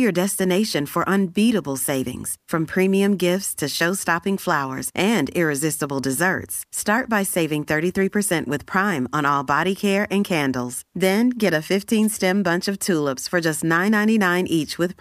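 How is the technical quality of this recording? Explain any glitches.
One glitch stands out in the speech. At 12.01 to 12.08 s, between "get a" and "bunch of tulips for", a brief swish of static lasting about 76 ms breaks over the voice. It is a wireless microphone noise hit. The analogue FM radio link from the microphone faded for a moment as reflected copies of the signal cancelled the direct one. As the carrier weakened, the receiver's own hiss rose and briefly covered the voice.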